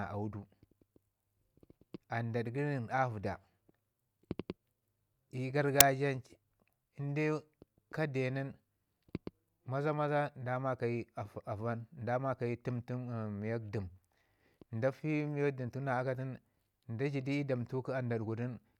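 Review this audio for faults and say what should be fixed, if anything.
At 5.81 s the speech is interrupted by a very brief, hard-edged burst of very loud white noise, a few milliseconds long. This is file tags played as audio: a block of metadata, here compressed image data such as an embedded cover picture, has been read by the decoder as sample values. Because compressed bytes are effectively random, they decode as very loud broadband static, starting and stopping abruptly at the block boundaries. Prevent it by having the decoder or parser skip tag and picture chunks correctly, so only the declared audio data is ever passed to playback.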